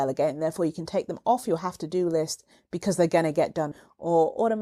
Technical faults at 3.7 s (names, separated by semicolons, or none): stream segment skipped